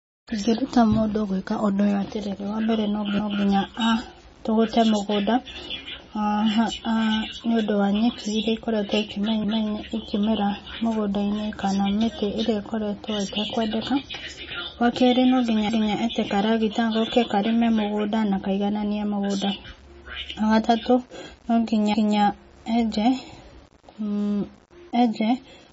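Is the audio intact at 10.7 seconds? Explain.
No. At 10.7 seconds, as across the whole clip, the speech is grainy, with rough distortion that follows its level. This is low bit depth without dither; the coarseness points to about 8 bits with plain rounding, leaving error roughly 30 dB below the signal. A spectrogram would show signal-shaped noise, and the waveform's quietest parts would show visible stair-steps.

The same moment also sounds watery and swirly, with smeared consonant onsets and nothing above 7.7 kHz. That points to heavy MP3 compression, likely at a low bitrate around 24 kbps. The encoder sheds treble and zeroes weak frequency lines frame by frame, which a spectrogram shows as a flat ceiling at 7.7 kHz over flickering, patchy energy below it.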